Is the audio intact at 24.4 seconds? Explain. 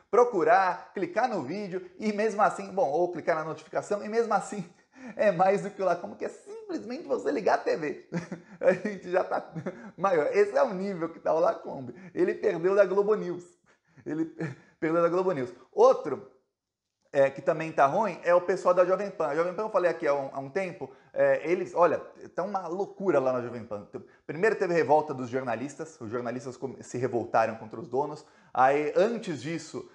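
Yes, at 24.4 seconds the audio plays through cleanly, with no dropout, click, distortion or other fault.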